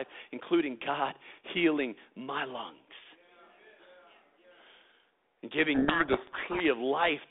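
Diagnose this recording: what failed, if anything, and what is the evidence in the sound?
Codec stage: a codec payload misread from 5.74 to 6.62 s. G.726 code words unpacked in the wrong bit order bury the speech in harsh distortion, showing as dense spectrogram hash.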